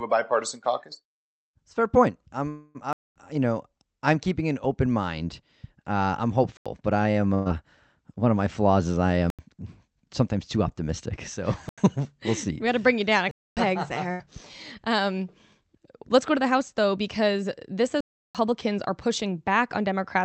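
Just after "fair point", at 2.49 s, the sound stretches into a fading buzz or hiss for about 0.25 s and then carries on with nothing lost. This is a call audio freeze, likely from held-up packets draining the jitter buffer so the receiver extended the last sound.

A block of digital silence follows at 2.93 s: a 0.23 s hard drop to silence. The same fault recurs at 6.57 s (just before "but I"), 9.30 s and 11.69 s, each an 85 ms hole that fits a 4096-sample output buffer not filled in time. It recurs again at 13.31 s (0.26 s) and 18.01 s (0.34 s, before "are pushing"), the last fitting a 16384-sample block.

A burst of packet loss hits at 7.34 s. About 113 ms of concealment fades out and then the audio jumps ahead, with 120 ms missing. A second burst at 14.12 s conceals about 81 ms and skips 80 ms.

From 16.00 to 17.78 s a jitter buffer speed-up trims short pitch-period pieces to reduce excess delay. 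Roughly a tenth of a second is removed, so the sound runs about 6% faster at unchanged pitch and feels hurried, over the call path's 8 kHz Opus band limit.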